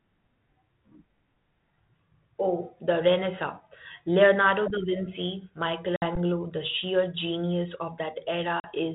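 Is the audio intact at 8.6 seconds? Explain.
No. At 8.6 s the speech drops into a hard-edged gap of about 40 ms, and when it resumes, shortly before 8.67 s, it comes back slightly distorted before settling. This is packet loss on an ADPCM call: a couple of packets of the 32 kbit/s G.726 stream went missing and were filled with silence, so the decoder's adaptive predictor and step size drifted from the sender's and needed a few tens of milliseconds to realign.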